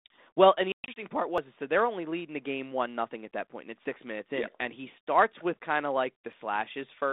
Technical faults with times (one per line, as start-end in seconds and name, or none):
0.72-0.99 packet loss on an ADPCM call
1.38 audio missing between chunks
3.85 audio missing between chunks
6.33 audio missing between chunks